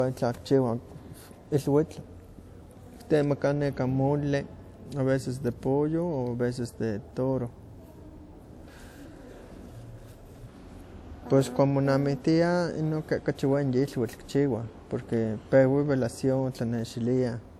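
Speech, with low-bitrate audio saved at a high bitrate throughout. The artefacts of a coarse first encoding stay audible. The later high-rate pass adds little and cannot restore what was lost. Nothing sits above 20 kHz. The sound points to 64 kbit/s WMA, likely re-encoded as 256 kbit/s MP3.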